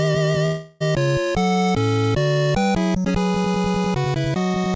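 From 0.46 to 0.82 s the sound smears into a fading buzz and resumes with 0.34 s lost, likely a long network dropout.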